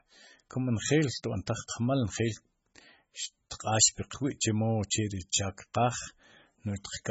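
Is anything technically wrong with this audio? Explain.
Yes. Throughout the speech, the sound is watery and swirly, with smeared onsets and nothing above 7.6 kHz. This is likely heavy MP3 compression. Starved of bits, which fits roughly 16 kbps, the encoder cut the treble and let weak frequency lines flicker between frames.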